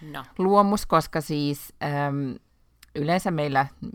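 Sample clock jitter runs through the whole recording: the converter's timing wanders by around two microseconds, so each sample lands slightly off, leaving a hiss about 40 dB below the speech that swells on loud, bright syllables. A spectrogram shows faint broadband haze tracking the speech and vanishing in pauses.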